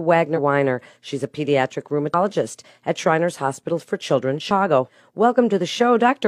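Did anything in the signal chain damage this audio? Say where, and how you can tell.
Yes. Compressed frames were skipped at the codec or decode stage. At 0.33–0.39 s, 2.09–2.15 s and 4.46–4.51 s, the speech jumps ahead by roughly 50, 100 and 150 ms, which are multiples of a frame of about 46 ms.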